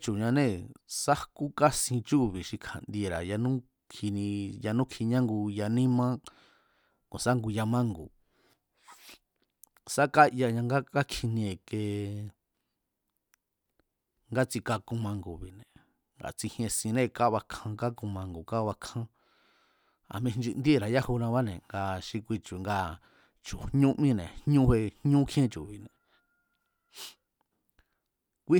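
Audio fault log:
No faults are logged for this speech clip.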